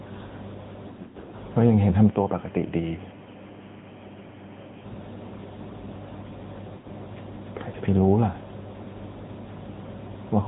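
The whole clip runs through an AMR narrowband mobile codec. Nothing above 4 kHz survives, and the speech has that plainly buzzy, synthetic vocal-tract-model quality, consistent with a mid-rate mode around 10.2 kbps.

From 0.88 to 1.35 s there are lost AMR speech frames, scattered dropouts whose longest run is about 60 ms. The decoder keeps re-using the last good settings with falling gain, so the sound warbles and dips repeatedly. Another short burst at 6.78 to 6.87 s gives a brief smeared fade before the speech returns a bit rough.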